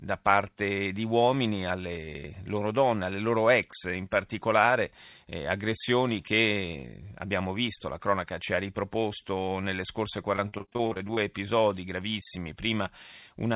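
Packets were repeatedly lost or delayed on a call link in this speech recording, giving repeated packet loss (robotic sound) from 10.36 to 11.19 s, between "ha riproposto nelle scorse" and "episodi gravissimi". Brief holes of up to 46 ms were patched by stretching the preceding sound, so roughly a third of that stretch turns choppy. The audio also carries nothing above 4 kHz, which fits a narrowband G.711 call path.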